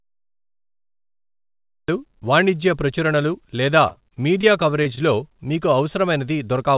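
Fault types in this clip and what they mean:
Cut-off start: the audio begins in digital silence and only cuts in at 1.88 s, landing mid-sound with no attack or fade. Unlike a dropout inside the clip, nothing came before it. The stream simply started late, so the opening is truncated rather than interrupted.
Repeated packet loss (robotic sound): from 3.88 to 4.45 s, six gaps, the longest about 35 ms, are patched one after another. About a fifth of the stretch is filled in, giving a choppy texture with pieces missing. Its repetition across half a second separates it from a single isolated concealment.
Short concealed packet loss: at 4.83 to 4.87 s, roughly 20 ms went missing and was filled by extending the preceding sound, then blended back. It is heard as a brief smear or wobble, one event only, where real audio is lost, unlike a stall.
Short stall from a late packet: at 4.95 to 4.99 s, a packet arrived about 17 ms late. 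The last sound was stretched to cover the wait, and playback then resumed where it left off. Nothing is lost. A sound is just held slightly too long, with a faint dip. All of this sits on a narrowband call path with nothing above 4 kHz, which fits G.711 A-law.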